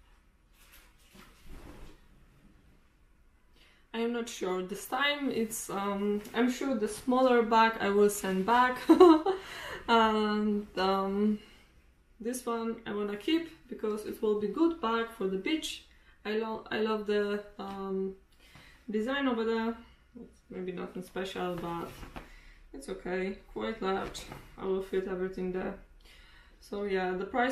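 No technical faults can be heard anywhere in the clip. Nothing in it points to a problem with capture, processing or playback.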